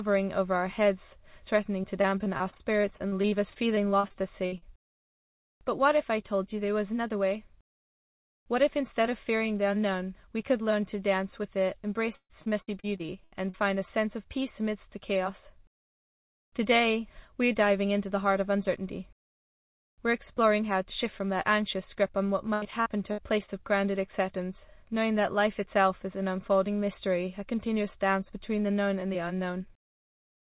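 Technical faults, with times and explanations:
1.82–4.64 s, 12.16–13.56 s, 22.54–23.50 s: repeated packet loss (robotic sound). Packets kept dropping, each gap patched by extending the last sound, giving choppy bursts with pieces missing, worst around 12.2–13.6 s with gaps up to 138 ms.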